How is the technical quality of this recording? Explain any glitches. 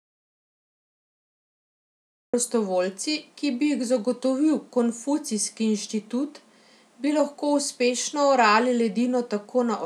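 The recording opens with a glitch: an audio dropout to silence is already under way when the clip begins and lasts until about 2.34 s, after which the speech enters mid-flow. The likely cause is the input signal being lost, through a disconnected device, failed link or stray mute, while recording continued writing silence. The gap is dead silence with no room tone, drawn as a flat line on the waveform and a blank, empty band on the spectrogram.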